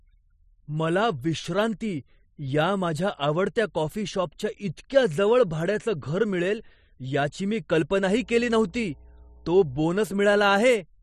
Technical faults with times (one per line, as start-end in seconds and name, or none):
8.09-9.86 mains hum